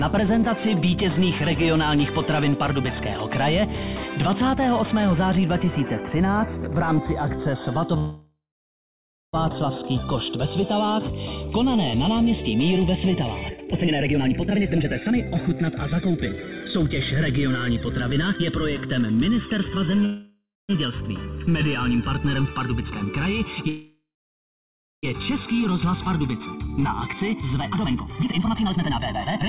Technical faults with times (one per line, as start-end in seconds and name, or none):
0.00-29.49 channels drifting apart
7.98-9.35 call audio freeze
13.49-16.79 jitter buffer speed-up
20.05-20.71 call audio freeze
23.69-25.05 call audio freeze
25.79-29.49 jitter buffer speed-up